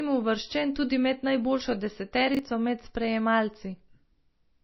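A speech recording with low-bitrate coding damage throughout and a brief scrambled moment near the middle. The whole clip carries plainly audible artefacts of what is likely MP3 compression at a very low bitrate, consistent with about 24 kbps. The encoder has discarded everything above 5.8 kHz, so sibilants sound dull and clipped, and weak spectral detail drops in and out from frame to frame, giving a watery, swirling texture. A spectrogram shows a flat ceiling at 5.8 kHz with nothing above it, and blotchy, flickering holes below it where components were zeroed. Just after "uvrščen tudi med najboljšo", from 2.35 to 2.39 s, chunks play out of order. A segment of roughly 21 ms is placed one chunk late, after the chunk that should follow it. No audio is missing, but the sequence is swapped, producing a short garbled stutter. On the waveform, three abrupt discontinuities mark the joins within that 40 ms span. 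On the spectrogram, they appear as thin vertical broadband streaks.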